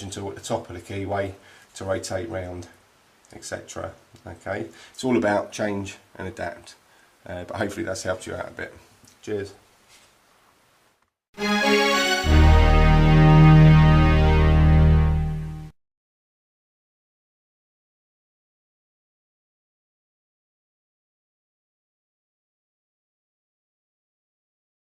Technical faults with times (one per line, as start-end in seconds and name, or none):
none